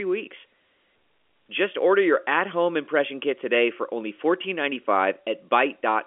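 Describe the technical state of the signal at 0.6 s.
At 0.6 s the signal is intact, with nothing beyond the normal telephone band of G.711 coding, which leaves no content above about 3.7 kHz.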